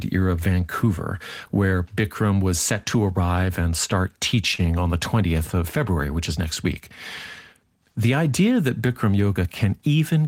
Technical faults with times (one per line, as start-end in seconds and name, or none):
4.55-4.60 short stall from a late packet